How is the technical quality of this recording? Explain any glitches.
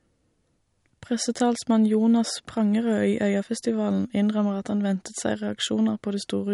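The technical quality is compromised throughout by MP3 compression, which is likely running at a low bitrate, something near 48 kbps going by the sound. Short of bits, the encoder removes the treble entirely, leaving nothing above 11.2 kHz, and drops weaker frequency lines that flicker in and out between frames. Across the whole speech clip this damage is plainly audible as dulled top end, a swirly, watery texture and softened consonant attacks.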